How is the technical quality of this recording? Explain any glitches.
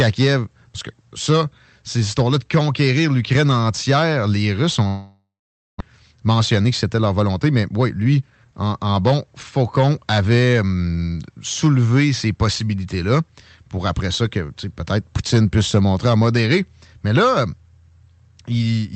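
The recording has two clear glitches, both near the start of the second quarter of the speech, carried over a call codec that limits the top end to about 8 kHz.

From 4.87 to 5.82 s there is a long network dropout, likely caused by packets failing to arrive for almost a second. The receiver stretches the last sound into a fading buzz, then leaves about half a second of silence. When the speech resumes, roughly 0.6 s of it is simply gone.

From 5.90 to 8.53 s comes a jitter buffer speed-up. Delayed audio piled up in the buffer, so the receiver trimmed tiny pitch-period slices, over and over. That removes about a third of a second. The speech runs at 112 percent speed with unchanged pitch and sounds hurried.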